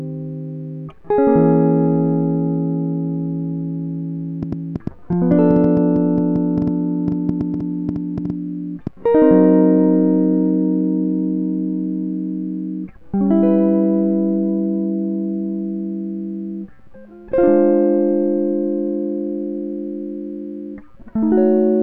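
From 4.43 s to 8.88 s the music carries a train of clicks, about six per second at an uneven pace, roughly thirty in all. The pulses share much the same shape and stand out about 10 dB above the music. They likely come from electrical interference or a faulty connection or power supply.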